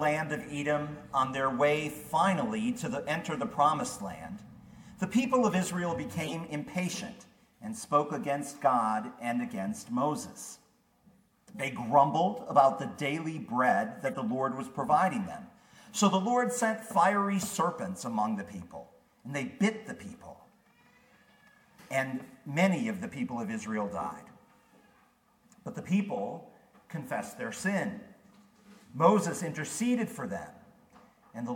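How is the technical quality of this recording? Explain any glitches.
Four short decoding glitches mar the recording. Corrupt frame decoded, at 0.41 to 0.59 s, 6.21 to 6.33 s, 11.56 to 11.64 s and 14.06 to 14.16 s: damaged compressed frames were played anyway, misplacing energy across the spectrum. Each sounds like a brief chirp or noise burst, peaking around -20 dBFS (the last nearer -25 dBFS), and their lengths suggest a few frames each.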